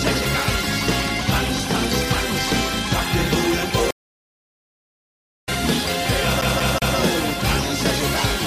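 At 3.91 s the sound cuts out for a stream reconnect. The connection dropped, the player fell silent for about 1.49 s, then reconnected and started a new decoder partway through the stream. When audio comes back at 5.49 s, it picks up at a later point. Roughly 0.7 s of material is simply missing.

From 6.41 s to 6.97 s the audio stutters like a CD stuck on one turn. A scratch sends the laser back at the same spot each revolution. Here a slice of about 186 ms replays three times. Each jump carries a short mute. The result is a quick, even, mechanical repeat that ends at 6.97 s.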